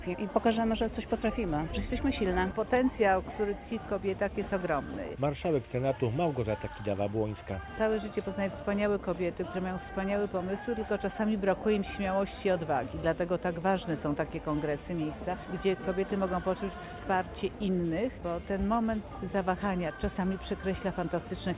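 Nothing technically wrong turns up anywhere in this audio, so there's no fault to point to here.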